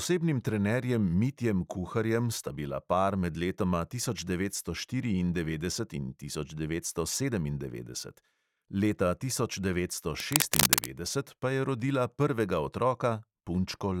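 Cable scratch noise runs from 10.2 to 10.91 s, just after "tisoč devetsto": a dense, ragged burst of scratching laid over the speech, a few decibels louder than it. The likely cause is a worn cable or connector being moved, its contact resistance fluctuating rapidly.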